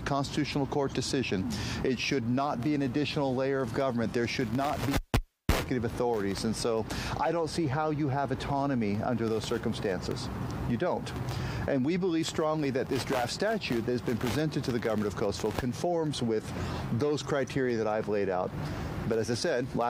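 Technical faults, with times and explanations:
Nothing technical jumps out here; the audio holds together the whole way with no problems to report.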